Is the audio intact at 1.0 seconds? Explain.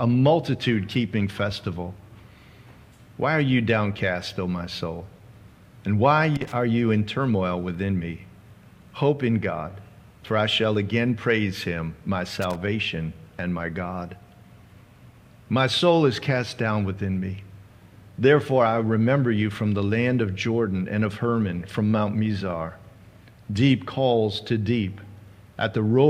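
Yes, the audio is intact at 1.0 seconds, with no dropout, click, distortion or other fault at that moment.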